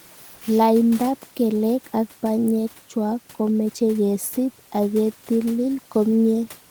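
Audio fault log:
0.35–0.41 s, sound dropped by the voice detector: for 60 ms the speech gives way to flat, steady noise, then resumes. The sender's voice detector likely mistook quiet speech for background and paused transmission, as Opus DTX does, so comfort noise filled the gap.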